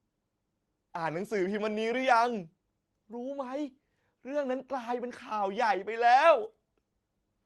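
Nothing stood out on listening to this speech, which carries the sound of an Opus call path with its top end rolled off around 12 kHz.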